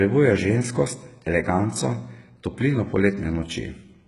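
All the way through, the speech has that coarse, metallic top end, and nothing comes through above about 11.1 kHz. It's likely HE-AAC compression at a very low bitrate, around 12 kbps, with the treble rebuilt from copied lower bands rather than coded, so sibilants come out gritty and lispy.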